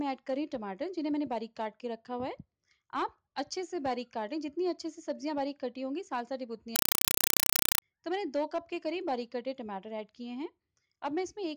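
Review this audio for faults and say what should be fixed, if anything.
From 6.76 to 7.82 s, a compressed stream is played as audio: loud chattering static made of 4 ms noise bursts at 31.25 Hz, consistent with undecoded AC-3 read as PCM samples. To prevent it, make sure the receiving device decodes the Dolby Digital stream, or have the source send PCM over the S/PDIF or HDMI link.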